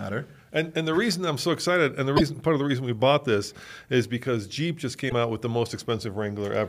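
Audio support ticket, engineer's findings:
Damaged data in compressed stream, 2.13–2.21 s and 5.06–5.12 s. Short glitches breaking the speech, about 80 ms and 70 ms. Probable component: decoder input. Corrupted bytes cause frames to be misread, sync lost until next valid frame header.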